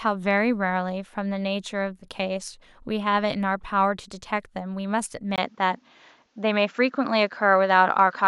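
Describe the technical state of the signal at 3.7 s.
At 3.7 s the speech signal is intact, with no audible dropout, distortion, glitch or other technical fault at that moment.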